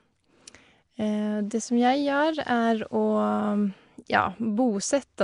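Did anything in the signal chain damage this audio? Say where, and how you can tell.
Yes, at the codec stage: throughout, the speech has a rough, hissy halo and underwater smearing, with nothing above 10.6 kHz. This is likely Nellymoser compression, which fills bit-starved bands with noise.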